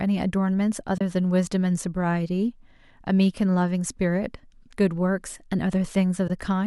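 Two brief soft-edged dropouts break this speech recording, fading out and back in at 0.98 to 1.01 s (30 ms) and 6.28 to 6.30 s (20 ms). These are AAC frame loss with muting: the decoder zeroed the missing frames, the overlapping windows smeared the gap's edges, and the durations fit roughly three and two lost 10 ms frames of the likely low-delay AAC compression, which only lightly colours the sound.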